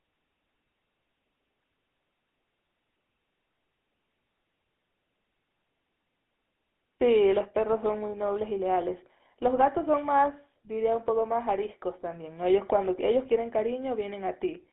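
Speech throughout the clip has passed through a GSM full-rate codec, and the damage is plainly audible from start to finish. The band is confined to roughly 200 Hz to 3.5 kHz, giving a thin, boxed-in telephone sound with no air above it. The codec rebuilds the signal from a vocal-tract filter excited by a coarse, regularly spaced pulse train, consistent with a 13 kbit/s GSM encoding.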